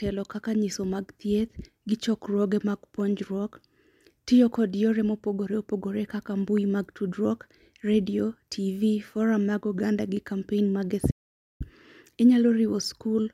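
Speech that cuts to dead silence from 11.11 to 11.60 s, about half a second lost; an audio dropout to silence, likely from the input signal briefly disconnecting.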